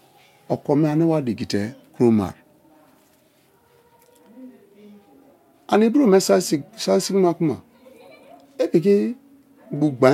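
Nothing stood out as a technical fault on listening to this speech recording.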